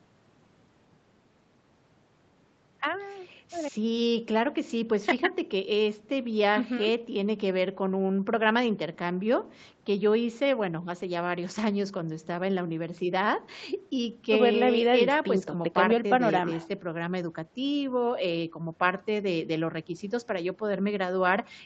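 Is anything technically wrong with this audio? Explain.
No, nothing technically wrong here.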